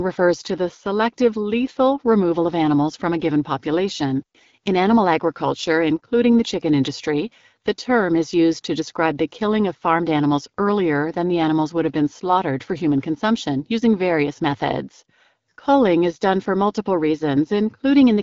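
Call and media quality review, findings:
Nothing stood out on listening; the speech comes through the AMR wideband (HD Voice) path at 12.65 kbit/s, with the top end stopping around 7.5 kHz.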